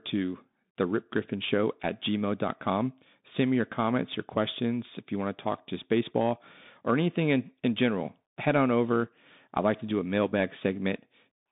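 From start to finish the speech passes through a Bluetooth CVSD headset codec, which encodes one bit per sample saying only up or down, with an adapting step size. Its damage is plainly audible: sibilants turn scratchy, louder high-frequency sounds outrun the step and distort, and a granular hiss sits beneath everything. The rate fits a 64 kbps link. A spectrogram shows energy confined to roughly 150 Hz–3.7 kHz with nothing above 3.8 kHz, and the waveform looks grainy and stepped.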